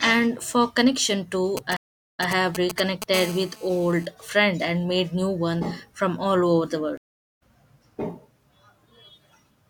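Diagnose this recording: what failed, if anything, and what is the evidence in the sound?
GSM signalling bursts hit the analogue wiring from 1.57 to 3.04 s, just after "for connection". A galloping pattern of short 217 Hz buzzes sits only a few dB under the speech. A nearby 2G phone's signalling bursts are being rectified by the audio circuit.

A stream reconnect, a network fault, occurs twice. At 1.77 s the audio drops out for about 0.4 s and resumes 0.1 s earlier, repeating material. At 6.97 s a 0.41 s gap resumes roughly half a second later, skipping material. Each time the decoder restarts mid-stream.

GSM phone buzz follows from 3.14 to 4.06 s, ending before "friend and made new". A hard, raspy 217 Hz buzz with many harmonics runs steadily at about 14 dB below the speech. The phone is now in a call, and the analogue circuitry rectifies its continuous transmit bursts.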